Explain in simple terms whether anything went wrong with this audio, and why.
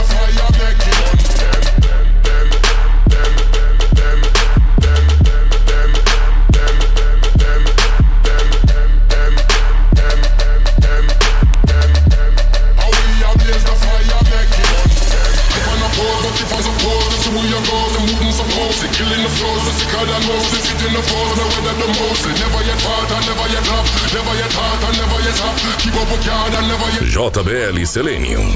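Six sharp clicks land at 1.54, 6.54, 11.54, 16.54, 21.54 and 26.54 seconds, exactly 5 seconds apart. This is a file header played as audio. The recording was assembled from 5-second WAV pieces, and each piece still carried the short block of file information at its front. Instead of being skipped, those bytes were played as sound, so each new piece opens with a brief snap no matter what the audio is doing at that moment.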